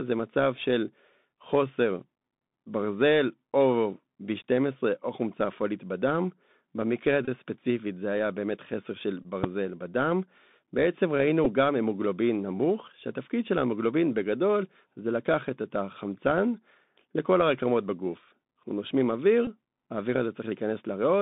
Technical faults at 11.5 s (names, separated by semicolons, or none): Bluetooth CVSD headset codec; Bluetooth headset packet repeated